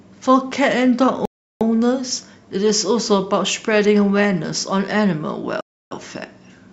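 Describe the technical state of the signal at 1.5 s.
At 1.5 s the speech has stopped dead for a rebuffering stall. The silence runs from 1.25 s to 1.61 s. The player had used up all the audio it had downloaded, so it paused until more data arrived. When playback returns, the speech picks up exactly where it broke off. No sound is missing. The clip simply gains about 0.35 s of dead air, heard as an abrupt gap mid-flow.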